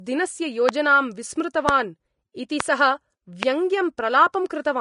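It's a speech clip with plainly audible Vorbis compression the whole way through: nothing comes through above about 10.5 kHz, and the treble that remains sounds grainy and hissy. That points to a low-rate encode, somewhere around 34 kbps, where the codec's coarse treble quantisation likely swapped the fine detail for noise. On top of that there are four separate loud pops, at 0.69–0.71 s, 1.69–1.71 s, 2.60–2.62 s and 3.43–3.45 s. Each is a single sharp hit roughly 20 dB above the speech, with the speech continuing underneath, most likely a voltage spike from a plug, switch, static or driver glitch.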